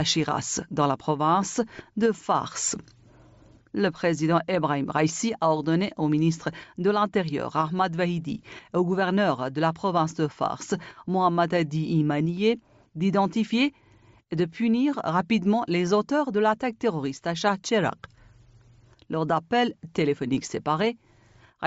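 No technical faults can be heard anywhere in the recording. It has passed through a call's microphone processing, which trims away the lowest bass and leaves nothing above 8 kHz, as that path normally does.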